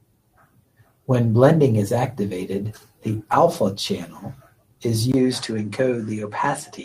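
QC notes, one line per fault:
3.53 s, lost packet rebuilt from error correction. A single 20 ms stretch of the speech turns briefly rough and noisy. There is no gap or dropout. One packet never arrived. The next packet carried a low-bitrate backup copy of it, and the decoder played that copy in its place. That backup holds less detail than a normal frame, so the patch sounds coarser than the speech around it for that instant.
5.12 to 6.84 s, input switched to a poorer device. The speech drops out for about 20 ms. It then returns sounding duller, with nothing above 10.1 kHz until the end. A new background hiss sits roughly 45 dB below the speech. Loudness stays about the same. The likely cause is a change of microphone or a headset call profile mid-recording. The new input passes a narrower band and carries its own noise.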